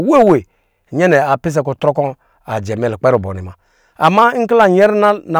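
From 0.14 to 0.34 s the speech runs into hard clipping. The signal is driven about 4 dB past what a stage in the chain can pass. Its peaks are sliced flat. Those squared-off tops add harmonics high in the spectrum. The result is a harsh, gritty fuzz on the loud parts of this stretch. At 1.88 s a second, much shorter overload occurs, about 1 dB over. It cuts the peaks and leaves a brief crackle.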